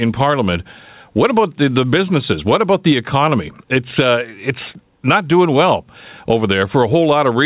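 Throughout the speech the gain swings by around 15 dB, pulled down under each loud syllable, while the audio stays capped at 4 kHz by the call codec. That is gain pumping, likely from a fast limiter fighting excessive input gain. Unlike a noise gate, the level never cuts out; it rises and falls smoothly.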